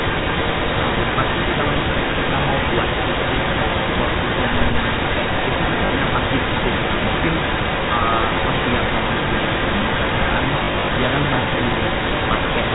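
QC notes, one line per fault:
Throughout: echo leak. A delayed copy of the speech follows it by about 0.21 s, at roughly the same loudness. The far end's echo canceller likely failed to remove what its loudspeaker fed into its microphone, so the talker hears themselves returned.
5.86–5.90 s and 10.64–10.88 s: packet loss with last packet repeated. The receiver replayed the last packet to fill the gaps: 40 ms at 5.86 s, then 120 ms scattered over 240 ms, with runs up to 40 ms. The repeated runs buzz like a brief robotic stutter.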